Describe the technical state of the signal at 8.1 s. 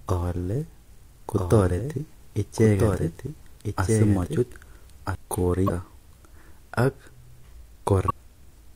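At 8.1 s there is damaged data in the compressed stream, lasting from 8.06 to 8.11 s, about 46 ms. The corrupted bytes there can't be decoded properly, so the decoder misreads the frames, loses sync and hunts for the next valid frame header. The result is heard as a chirp, squawk, click or short hole.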